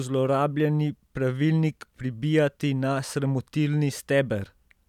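No technical faults can be heard anywhere in this speech.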